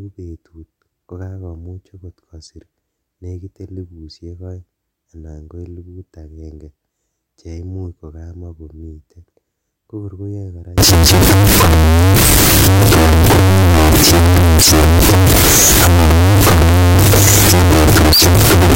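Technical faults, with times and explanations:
10.78 to 18.76 s, signed and unsigned mixed up: from this point to the end the speech turns into a very loud, harsh distortion, and the quiet stretches between phrases blast as loudly as the rest. The likely cause is 16-bit samples being read with the wrong sign convention, which flips the top bit. Every small swing around zero becomes a leap across the whole range, so the waveform is wrecked.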